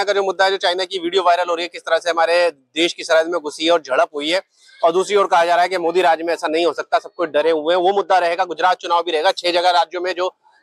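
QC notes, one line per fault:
6.45–8.56 s, de-emphasis applied wrongly: the top end slides away smoothly, reaching about 8 dB down at 10 kHz relative to 1 kHz, because a treble-cut curve meant to reverse pre-emphasis landed on material that never had that boost or had already been de-emphasized, leaving this stretch dull and muffled.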